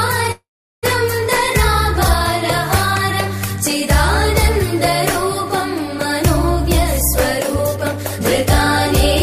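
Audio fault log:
0.31–0.85 s, call audio freeze. The sound stops moving forward. The last moment is stretched into a buzzy tail that fades, then about 0.4 s of silence follows. About half a second is filled in this way. When the sound returns, it picks up exactly where it stopped, with nothing missing. The likely cause is packets held up in transit, so the jitter buffer ran empty and the receiver had to cover the gap. Everything after this point arrives about half a second later.
7.76–8.47 s, jitter buffer speed-up. The sound plays about 14 percent fast but keeps the same pitch, so it comes across as hurried rather than higher. Roughly a tenth of a second is taken out across this stretch. The receiver was holding more audio than it needed and trimmed the excess by cutting many short pieces, each one or a few pitch periods long.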